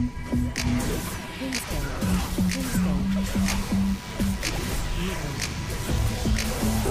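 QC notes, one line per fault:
3.86 to 6.91 s, mains buzz: a raspy 50 Hz buzz cuts in at 3.86 s and keeps going right to the end, sitting roughly 20 dB under the sound. It isn't a smooth hum. Sharp switching spikes from something like a dimmer, a rectifier or an unshielded run are getting in twice per mains cycle. That stacks up harmonics of 50 Hz reaching several kHz, which gives it that gritty, steady edge.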